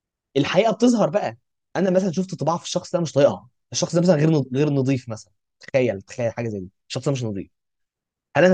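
No technical faults can be heard in this speech recording. The sound continues steadily throughout, with nothing breaking into it at any point.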